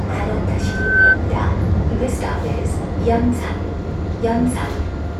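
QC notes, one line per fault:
0.60–1.18 s, loudspeaker feedback squeal: a single 1.5 kHz tone swells over just under half a second to roughly 10 dB above the sound, as the microphone-loudspeaker loop gain exceeds one there. Unlike a steady interference whine, it builds from nothing and then stops.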